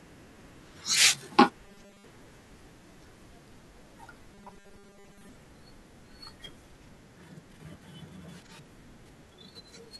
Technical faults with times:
1.65-2.04 robotic sound from repeated short buffers
4.34-5.29 robotic sound from repeated short buffers

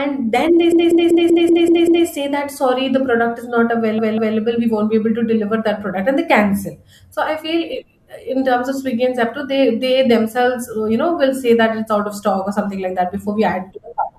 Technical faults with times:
0.72-2.06 repeated frames
3.98-4.37 repeated frames

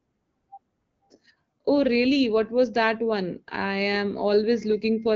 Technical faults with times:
none

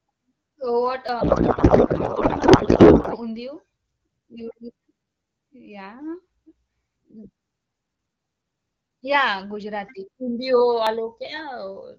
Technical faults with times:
1.09 audio missing between chunks
1.21-3.19 codec payload misread
3.04 audio missing between chunks
6.95 audio missing between chunks
10.87 audio missing between chunks

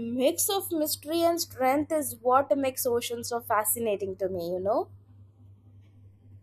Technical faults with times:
0.00-6.43 channels drifting apart

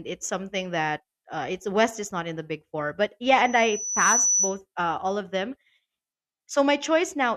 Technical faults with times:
3.44-4.61 loudspeaker feedback squeal

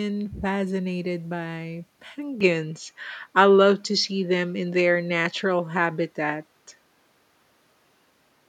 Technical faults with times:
2.40-8.48 input switched to a poorer device

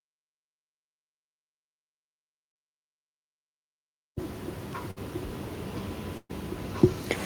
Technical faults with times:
4.91-5.00 burst of packet loss
6.17-6.31 burst of packet loss

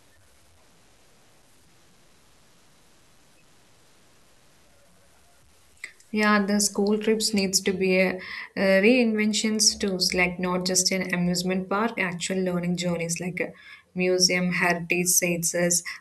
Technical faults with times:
0.00-7.30 low bit depth without dither

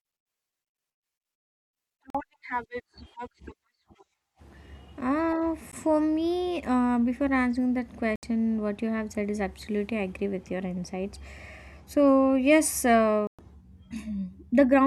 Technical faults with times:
2.10-2.15 Bluetooth dropout
5.72 Bluetooth dropout
8.16-8.23 Bluetooth dropout
13.27-13.39 Bluetooth dropout

